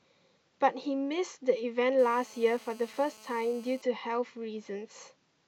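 From 1.99 s to 3.82 s the speech carries GSM phone buzz, a hard, raspy tone at about 217 Hz with a dense stack of harmonics that bears no relation to the talker. A nearby 2G handset was transmitting in bursts at that rate, and the audio circuitry rectified the radio pulses into the signal path. The handset was in a call, so the buzz holds steady throughout, sitting about 25 dB below the speech level.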